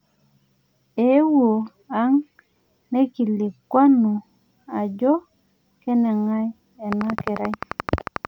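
From 6.93 s to 8.26 s, a steady ticking rides over the speech, about fifteen sharp, evenly spaced clicks at 11.3 per second, peaking roughly 15 dB above the signal. This train of clicks is likely interference from nearby equipment or a faulty connection or power supply.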